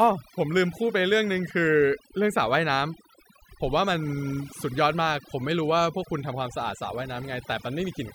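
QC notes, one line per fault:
Throughout: overdone noise removal. The noise reduction was set far too hard. Frequency bands near its noise estimate are pulled down or switched off, taking quiet parts of the voice with them. Pauses fall to near silence with twinkling specks.
Throughout: sample clock jitter. The converter clock wanders, so each sample lands a little early or late. The timing error, around a microsecond and a half, scales with the waveform's slope. It adds a faint hiss or roughness, roughly 40 dB below the speech, strongest on loud and bright sounds.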